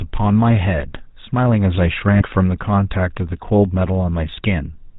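From the start, the speech carries the coarse, buzzy grain of the GSM full-rate codec, and the damage is plainly audible. The codec rebuilds the voice from a vocal-tract filter excited by a sparse, regularly spaced pulse train, which leaves a gravelly roughness on voiced sounds. Nothing survives above 4 kHz, so sibilants and brightness are missing throughout. The overall character fits the 13 kbps full-rate GSM codec.

From 2.16 to 2.22 s the signal is hit by lost GSM frames: about 40 ms of audio is missing, which fits two lost 20 ms frames. The decoder conceals the gap by reusing the parameters of the last good frame, so instead of a clean dropout the sound briefly freezes into a rough, metallic ring. The loss is short enough that the ring cuts off before it fades to silence.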